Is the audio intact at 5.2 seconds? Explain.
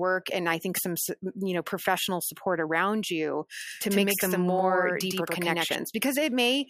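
No, a doubled audio track runs from 3.67 to 5.75 s, most likely from the speech being captured a second time by a slower path. A copy trails the original by about a tenth of a second at roughly equal loudness, giving a dry, abrupt double image.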